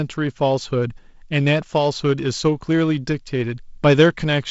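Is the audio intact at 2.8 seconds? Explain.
Yes, at 2.8 seconds the speech is intact, with no dropout, click or other fault.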